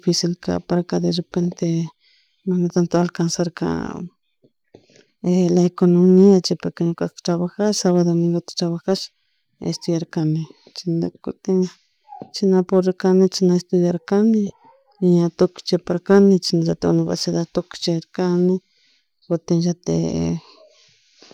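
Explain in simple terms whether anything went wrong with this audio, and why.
Between 10.20 and 11.38 s the speech briefly slows by about 5% and drops in pitch by nearly a semitone (about 93 cents), then snaps back to normal. This sounds like a drift correction step, likely caused by software that keeps two device clocks in agreement. It nudged the playback rate in one jump to rebalance its buffer, so speed and pitch moved together for just over a second before returning.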